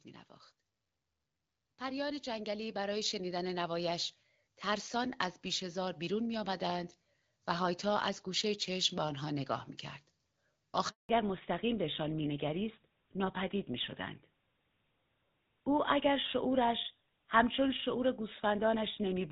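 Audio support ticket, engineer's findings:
Automatic gain rising, 1.62 to 4.6 s. Level and background noise floor swell together by about 10 dB over roughly 3 s. Probable component: AGC in the capture path. It judged the input too quiet and ramped its gain up slowly rather than stepping it, so the noise floor climbs in step with the speech.

Handover gap, 10.89 to 11.09 s. Speech decays within a few tens of ms, then 200 ms of silence. Probable component: network handover. No speech frames arrived while the call moved between links, and anything spoken in that window is gone rather than concealed.

Fallback to narrowband, 11.09 s to end. Nothing above 4 kHz from here on, and the voice goes duller and rougher. Before this point the sound is wideband and clear, which fits HD Voice at around 12.65 kbit/s. Probable component: codec renegotiation after the handover. The change is consistent with a drop to a legacy full-rate narrowband codec, which carries no band above 4 kHz.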